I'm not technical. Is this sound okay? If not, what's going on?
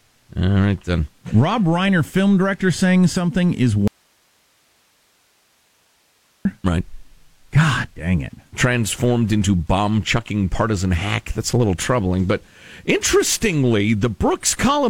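No. Clock slip clicks run from 0.20 to 14.75 s, faint ticks about every fifth of a second, likely from two devices running on unmatched clocks. An audio dropout to a faint residue cuts the speech from 3.88 to 6.45 s, leaving only hiss, likely because the signal was lost while the equipment after the break stayed on.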